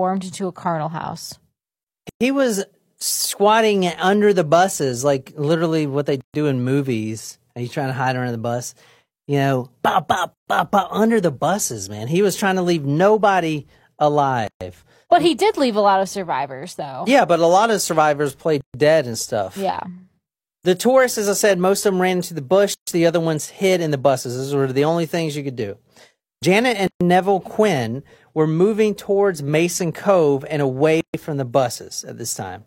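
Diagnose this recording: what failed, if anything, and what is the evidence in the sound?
Short silences of about 115 to 133 ms cut the speech every 4 s, at 2.09, 6.21, 10.34, 14.47, 18.61, 22.74, 26.87 and 31.01 s. This is a codec-stage gap at a join of encoded pieces: separately encoded segments were joined without trimming their encoder delay and end padding.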